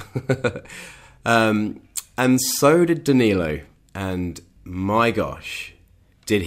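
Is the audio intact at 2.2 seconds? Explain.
Yes, at 2.2 seconds the speech plays through intact, with no dropout, click, distortion or other fault audible at that point.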